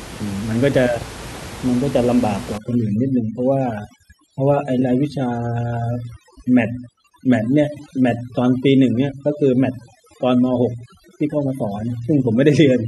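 From 2.58 s to the end of the clip at 12.88 s, a noise reduction stage is applied far too aggressively, which is overdone noise removal. It pulls individual frequency bands down or shuts them off whenever they sit close to its noise estimate, so the room noise, about 15 dB below the speech, drops and breaks up into twinkling specks. Softer parts of the speech are stripped away with it.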